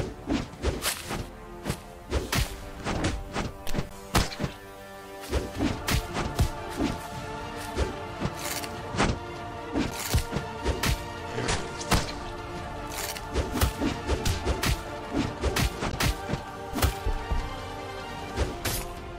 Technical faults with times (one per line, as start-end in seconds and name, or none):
3.89 gap between stream segments
9.91 gap between stream segments
15.91 gap between stream segments